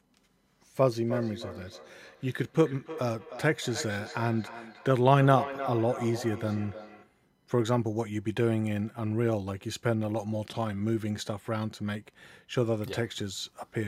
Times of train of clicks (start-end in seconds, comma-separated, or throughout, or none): none